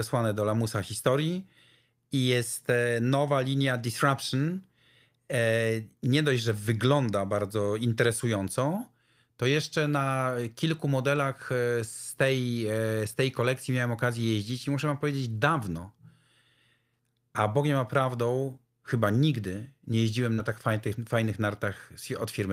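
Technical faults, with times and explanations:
20.33 to 20.40 s, short concealed packet loss: About 40 ms of audio never arrived in time. The receiver filled roughly 45 ms by extending the preceding sound, then blended back into the real signal. This is heard as a brief smear or wobble near 20.3 s.
20.38 to 20.40 s, lost packet rebuilt from error correction: A 20 ms stretch, which fits one lost packet, was rebuilt from a low-bitrate copy carried in the next packet. There is no gap. That short section sounds rougher and noisier than the audio around it.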